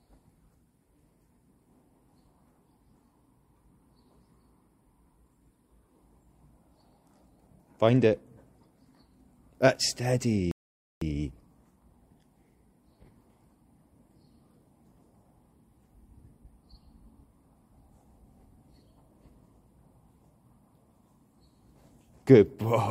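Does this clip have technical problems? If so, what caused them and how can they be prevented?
Yes. A rebuffering stall runs from 10.51 to 11.01 s. Playback ran out of downloaded audio, fell silent, then resumed exactly where it stopped, adding 0.5 s. The waveform shows a flat gap, the spectrogram a blank band. A deeper playback buffer prevents it.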